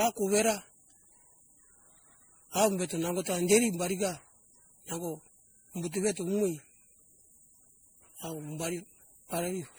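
A speech clip with generation loss throughout. The whole recording sounds swirly and hollow, with a smeared, watery texture. Consonant attacks are blurred rather than crisp. Content extends up to about 20.9 kHz, so this is not simple band-limiting. The likely cause is repeated lossy re-encoding, roughly seven passes, in a chain that fits 64 kbit/s MP3. Each pass quantises on a shifted frame grid, so noise and spectral holes accumulate.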